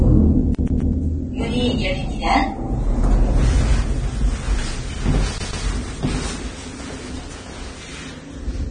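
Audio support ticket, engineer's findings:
Vorbis compression, whole clip: hissy, grainy top end, roughened tones, smeared attacks. Nothing above 9.7 kHz. Likely a heavily compressed Vorbis stream, the damage consistent with a low bitrate near 24 kbps. Encoder lowered the cut-off and quantised the remaining treble so coarsely that fine detail turned into noise of similar energy. Component: source encoding stage, upstream of playback.

CD stuck on one turn, 0.55 to 0.93 s and 5.38 to 5.64 s: rapid, even stutter, one 129 ms slice replayed with brief mutes at each jump; three repeats in the first event, two in the second. Probable component: disc transport. Scratch kicks the laser back one track at the same point each rotation, so the same short passage loops.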